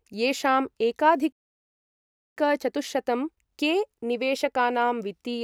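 The speech cuts to silence from 1.32 to 2.37 s, a gap of about 1.04 s, then resumes: a playback stall, likely from the player running out of buffered data.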